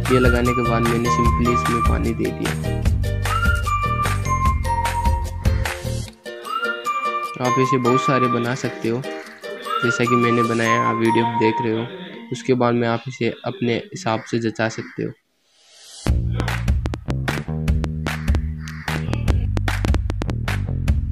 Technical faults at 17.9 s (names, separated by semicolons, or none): train of clicks